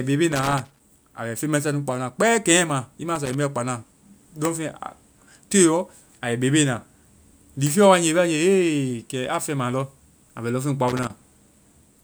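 A worn or dirty contact in the cable path is making and breaking, so this speech clip suffers loose connector crackle: the signal is chopped into irregular scratchy bursts from 0.32 to 0.80 s, 3.16 to 3.34 s just after "i ma", and 10.88 to 11.11 s.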